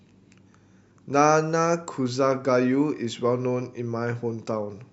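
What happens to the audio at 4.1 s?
Nothing goes wrong at 4.1 s; the speech plays through that moment intact, with no dropout, click, distortion or other fault.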